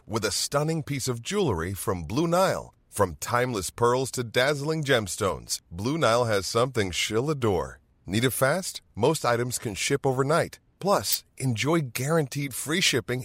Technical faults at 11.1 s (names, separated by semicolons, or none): DAB burbling